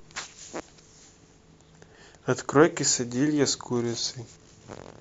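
No technical faults can be heard in this speech recording. There is nothing that needs a time stamp or an explanation.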